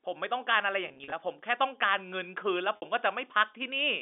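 Speech on a G.711 telephone channel shows packet loss with pitch repetition at 0.88 to 1.12 s, where about 120 ms drops out in short runs of up to 40 ms, and at 2.76 to 2.82 s, a 60 ms gap. The receiver bridges each gap by repeating the last pitch period, producing brief buzzy holds in the first stretch, while the 60 ms gap fades out into silence before the speech returns.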